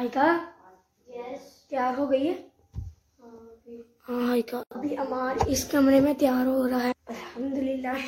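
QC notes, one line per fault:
6.88–6.92 s and 7.90–7.95 s, damaged data in a compressed stream: two short glitches, about 50 ms each, where corrupted bytes made the decoder misread frames, lose sync and emit garbage until it locked onto the next valid frame header.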